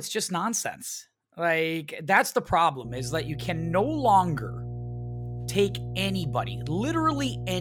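From 2.85 s to the end, mains hum adds a steady 60 Hz tone from power-line coupling. Its fixed pitch distinguishes it from rumble, and it sits fairly loud beneath the speech.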